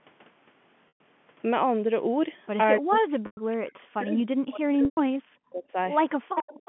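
At 0.88–1.00 s, 3.26–3.37 s and 4.85–4.97 s, packet loss with pitch repetition bridges gaps of 120, 110 and 120 ms by looping the last pitch period. Each gap shows as repeated identical waveform cycles and flat harmonic stripes that fade out.

From 2.79 to 5.76 s the speech dips for about two seconds in total, by up to around 40 dB. This is likely speech suppressed in double talk, with the canceller ducking the talker while the far side spoke. It shows as shrinking envelope chunks.

At 6.24–6.35 s the background is gated by the echo canceller, dropping by about 40 dB. This appears as a brief near-silent notch in the waveform and a blank column on the spectrogram.

From 6.35 s to the end, an echo leak is likely. A copy delayed by 288 ms sits only a few dB below the speech, showing as a ghosted, shifted duplicate of the harmonic pattern.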